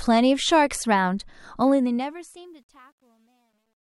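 From 1.6 s to the end, the fade-out stage drops to too few bits without dither, consistent with roughly 11-bit resolution. This truncation distortion turns the fade gritty, worst from 2.52 s.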